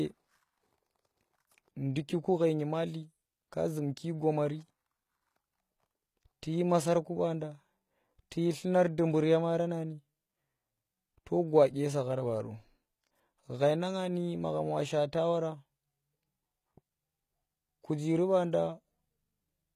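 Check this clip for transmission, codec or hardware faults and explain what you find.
There's one codec fault here, running through the whole speech clip: HE-AAC compression, likely, and at a low rate, since the damage is plainly audible and fits something around 20 kbps. The top end still sounds bright, with content reaching up to about 20.5 kHz, but that treble isn't the real thing. It's lower bands copied upward and shaped to a rough envelope, so the harmonics don't line up and the s sounds come out gritty and lispy.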